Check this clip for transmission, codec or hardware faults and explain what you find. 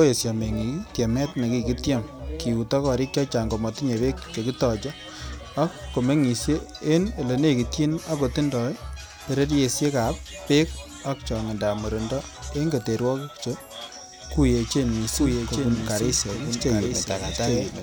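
A doubled audio track appears from 14.85 s to the end: a second, full-band copy of the speech runs about 0.7 s behind, roughly 5 dB quieter, with no decay or room colour. Its abrupt onset likely comes from a slower second capture path.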